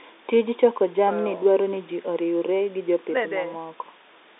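Nothing goes wrong anywhere in this speech, which simply sits in the usual telephone band of roughly 250 Hz to 3.7 kHz with nothing above 3.8 kHz, just as a working G.711 line at 64 kbps should sound.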